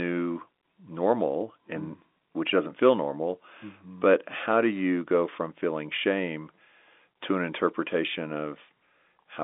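No technical faults can be heard in this speech recording. It carries the narrow sound of G.711 telephone coding, with the line band running from about 250 Hz to 3.6 kHz and nothing above roughly 3.7 kHz.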